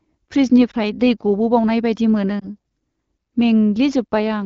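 At 0.71–0.75 s and 2.40–2.48 s, lost AMR speech frames cause brief warbling dips, each consistent with one 20 ms frame concealed by repeating the previous frame with reduced gain.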